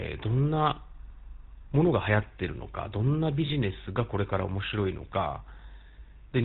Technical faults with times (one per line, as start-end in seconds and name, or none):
0.00-6.44 GSM full-rate codec
3.46-3.50 lost GSM frames